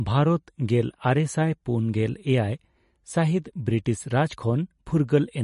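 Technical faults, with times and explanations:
Throughout: MP3 compression, nothing above 11.1 kHz, with plainly audible watery swirl from dropped weak frequency lines, unlike a clean low-pass; likely a bitrate around 40 kbps.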